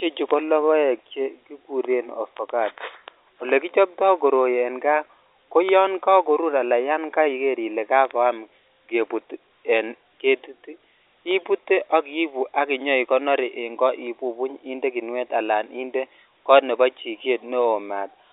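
No technical fault can be heard; the speech sits in the narrow telephone band of roughly 300 Hz to 3.7 kHz, which fits ordinary G.711 telephone coding of the A-law kind, and that coding leaves at most a faint trace.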